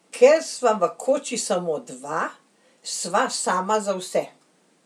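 From 2.93 s to 4.43 s the speech picks up a faint hiss and graininess that tracks the voice itself, thickening on louder and brighter sounds such as sibilants and dropping away in the pauses. This is sample clock jitter: the converter's clock wanders by roughly 0.4 microseconds, so each sample lands slightly off time. Steep, fast-changing parts of the waveform turn that timing error into a noise-like error around 45 dB below the signal.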